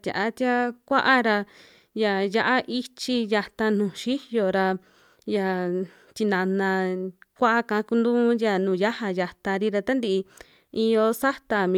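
There are no technical faults to describe in this speech recording.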